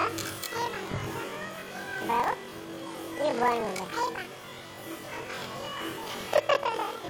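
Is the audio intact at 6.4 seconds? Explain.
No. At 6.4 s, as throughout the clip, the sound plays an octave high with a rapid flutter of about 23.4 Hz, yet its overall pace is unchanged. This is planar audio read as interleaved. Each block, which fits 2048 samples (42.67 ms), stores all left samples and then all right, but is read as alternating pairs. Every block therefore plays twice at double speed, left half then right half.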